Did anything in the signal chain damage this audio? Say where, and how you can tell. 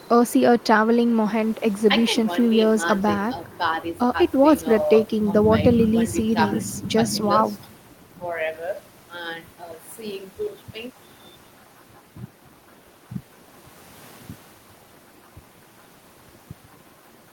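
No, nothing in the chain audibly damaged this speech recording: there is no sign of trouble at any stage between capture and playback.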